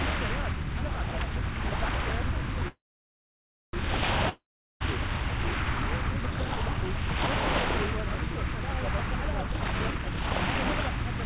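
At 2.68 s packets were likely held up in transit and the jitter buffer ran dry, causing a call audio freeze. The last sound trails off as a short fading buzz, then about 0.97 s of silence, until 3.76 s. The audio resumes where it stopped, nothing lost, just delayed by about 1.05 s.

From 4.29 s to 4.83 s a long network dropout follows, likely from audio never arriving. A brief fading buzz gives way to about 0.41 s of silence, and the sound returns with about 0.52 s missing.

From 9.47 s to the end, the jitter buffer speed-up kicks in. The buffer had built up too much audio, so the receiver repeatedly cut out short pitch-period slices, trimming roughly a second in total. The sound runs at about 148% speed with unchanged pitch and feels hurried. Throughout, nothing is heard above 4 kHz, which fits a G.711 mu-law call codec at 64 kbps.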